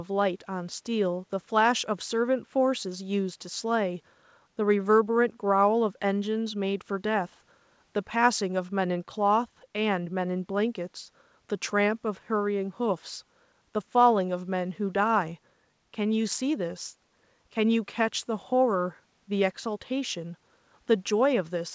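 Nothing stood out on listening to this speech, which reaches the ear through a G.722 call path at 64 kbps with nothing above 8 kHz.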